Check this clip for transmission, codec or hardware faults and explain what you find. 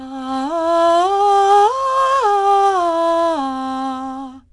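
There is one codec fault. Throughout the music, a gritty hiss rides on every loud passage and nothing is heard above 10.7 kHz. This is 4-bit ADPCM compression: each sample is coded as a coarse step from a prediction, so level-following noise appears, and the bandwidth limit fits a rate near 89 kbps.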